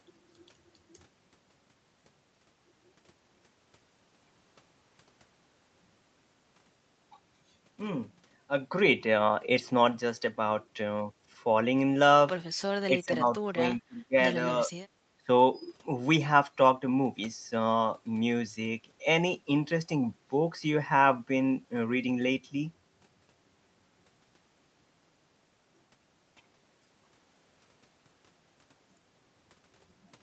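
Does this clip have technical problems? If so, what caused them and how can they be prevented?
Yes. At 12.87–14.15 s the speech sinks by about 20 dB for roughly a second, and it dips again briefly at 15.2 s. This is likely speech suppressed in double talk: with both sides talking at once, the echo canceller took the talker for loudspeaker echo and turned it down. A headset, or an echo canceller with stronger double-talk detection, would prevent it.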